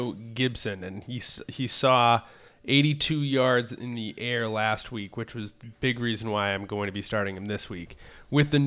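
Nothing in this bit of speech stands out as a technical fault, so there's no problem to point to anywhere along the way.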